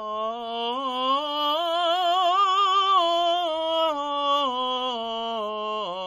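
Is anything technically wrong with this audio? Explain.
No, nothing technically wrong can be heard in this music clip. There are no faults to point to anywhere in it.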